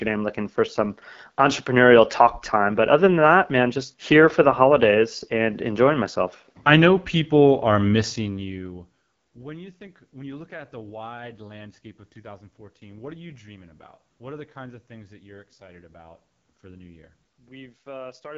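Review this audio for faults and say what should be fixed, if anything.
The whole clip goes through the AMR wideband (HD Voice) codec at 8.85 kbit/s, one of its two lowest rates, so the speech sounds rough and raspy throughout. At that rate the codec's pulse-driven vocal tract model can't capture the voice cleanly, and nothing comes through above 7.6 kHz. To prevent this, run the link at 12.65 kbit/s or higher, or record the source before it reaches the phone network.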